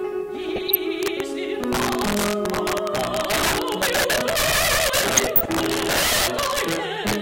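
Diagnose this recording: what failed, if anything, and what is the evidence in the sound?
Integer overflow in the sample-format conversion or gain stage runs through the whole recording. Loud peaks produce violent cracks, far harsher than clipping, because the signal is driven about 9 dB past full scale, putting roughly one sample in twenty over the limit. Instead of saturating, each of those samples wraps to the opposite sign and jumps across the full range, so every peak becomes a sharp discontinuity rather than a flattened top.

DAB burbling, a codec-level failure caused by weak reception, appears from 0.43 to 0.78 s and again from 5.17 to 5.50 s. Both stretches carry the sound of corrupted MP2 data. Bit errors at a rate of a few tenths of a percent slip past error correction. The damaged samples put short blips of noise in single sub-bands, and damaged scale factors make sub-bands jump in level for up to a frame. 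The two bursts hit 16 and 14 frames.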